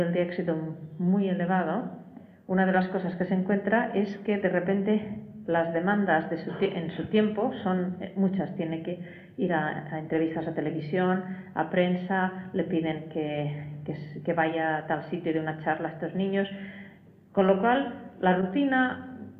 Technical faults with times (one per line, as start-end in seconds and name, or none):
none